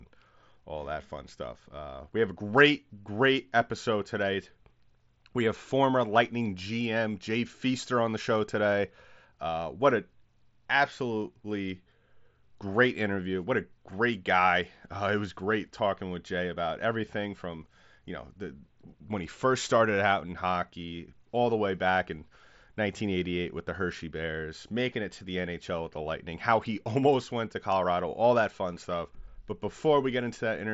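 No technical faults turn up anywhere in this speech, which carries the band limit of an mSBC Bluetooth headset link, with nothing above about 7.7 kHz.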